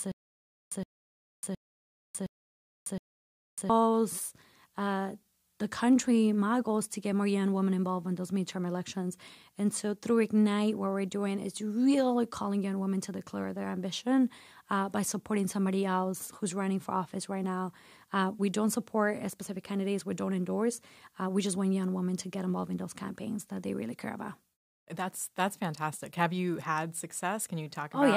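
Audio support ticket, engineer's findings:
Stutter with silent gaps, 0 to 3.7 s, already under way at start: the same 117 ms speech fragment repeats five times, each followed by 599 ms of digital silence, every 716 ms. Likely a stalled player or stream replaying its last fragment at each retry. Not a plain dropout: the identical burst recurs at a steady period, and the intervening audio is lost.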